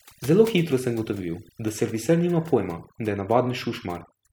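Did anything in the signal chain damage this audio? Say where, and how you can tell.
Yes, at the call processing stage. Overdone noise removal runs throughout: gaps sink to twinkling near-silence, and quiet parts of the speech are cut away along with the bands near the noise estimate.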